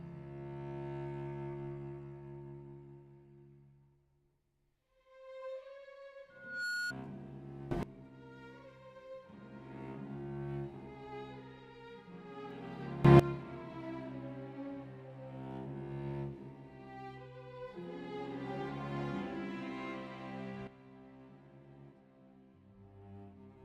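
From 6.3 to 6.93 s a 1.4 kHz tone swells over roughly 0.4 s into a squeal about 10 dB above the sound. This is loudspeaker feedback squeal, where the microphone re-amplifies its own loudspeaker output. At 7.71 to 7.83 s and 13.05 to 13.2 s, sound and background jump about 20 dB louder together, and from 20.67 s to the end they drop about 11 dB. All three are likely sudden gain jumps, applied without a ramp.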